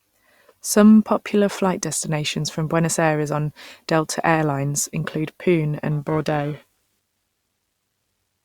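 From 5.91 s to the end of the clip at 8.45 s, the speech carries periodic clock jitter. The converter's sampling clock is being modulated at a steady rate of around 1 kHz, so each spectral component of the speech picks up sidebands spaced about 1 kHz above and below it. Higher-frequency content produces stronger sidebands. Audibly, this puts a rough, metallic edge on the voiced sound that disappears whenever the speech pauses.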